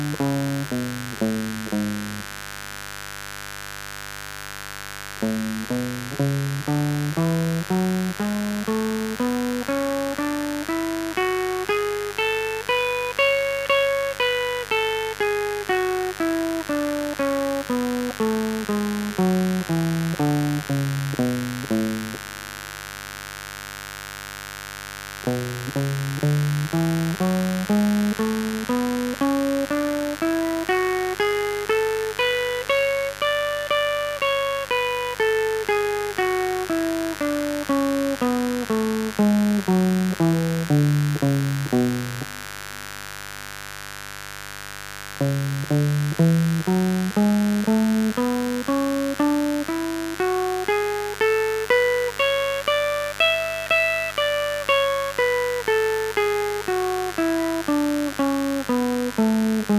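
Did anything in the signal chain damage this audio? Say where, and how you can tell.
Yes. Mains buzz enters in the analogue wiring: a steady raspy 50 Hz buzz, around 15 dB below the music, runs throughout, from switching spikes leaking in twice per cycle.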